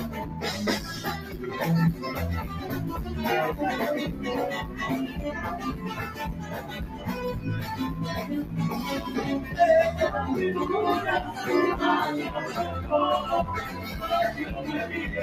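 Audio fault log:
Throughout: noise suppressor applied to music or sounds. A speech-tuned suppressor keeps treating steady, sustained material as noise, so level swings by around 10 dB and tails thin out. Unlike compressor pumping, the dips follow how steady the sound is rather than how loud.
0.09–0.43 s, 1.16–1.39 s, 6.35–7.07 s, 13.74–13.9 s: sound cut by the noise suppressor. Held or fading sound sinks by about 5, 6, 6 and 4 dB while onsets survive. It dips rather than vanishing, which separates it from a dropout.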